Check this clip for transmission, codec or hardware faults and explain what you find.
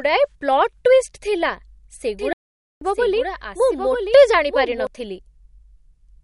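Three faults are audible: codec damage across the whole clip, a second copy of the audio in the middle section, and a brief dropout.

The MP3 compression damage runs throughout and is plainly audible. Nothing reaches above 11.2 kHz. The encoder zeroes weak frequency lines that flicker between frames, giving a watery, swirly texture and smeared attacks, which likely points to a low bitrate around 48 kbps.

A doubled audio track is present from 2.19 s to 4.87 s. A full-band copy of the speech trails about a second behind, roughly 5 dB quieter, with no room colour or decay. It starts and stops abruptly, likely from a slower second capture path feeding the same mix.

A playback stall runs from 2.33 s to 2.81 s. The output drops to silence for 0.48 s in mid-flow, then resumes. This is likely the player starving for data or its thread being blocked until it recovered.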